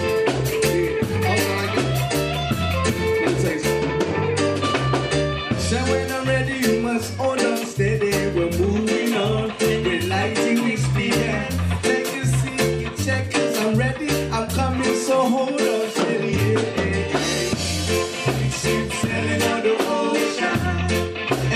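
From about 3.45 s to the end, the sound picks up a channel delay (comb filtering): one side runs roughly a sample late, and when the two are folded to mono the shared content cancels at the top. With a delay that tiny, only the first notch lands in range, up around 20 kHz, so you don't get the classic hollow, phasey comb. It's more a gentle dulling and loss of air in the highs from that point on.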